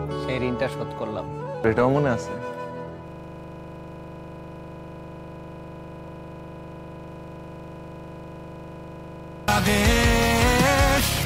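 The audio shows a system hang loop from 3.08 s to 9.48 s. A 40 ms slice repeats exactly, some 160 times, producing a rigid 25 Hz buzzing stutter. The system froze while the sound hardware kept replaying the same ring buffer.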